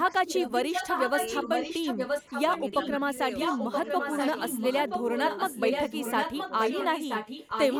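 From 0 to 2.96 s and again from 3.32 s to the end, an echo leak runs under the speech: a second copy trails 976 ms behind, only a few decibels quieter. This is likely a far-end speakerphone whose echo canceller let its loudspeaker pickup back into the call. On a spectrogram, each burst of harmonics reappears just under a second later, slightly fainter.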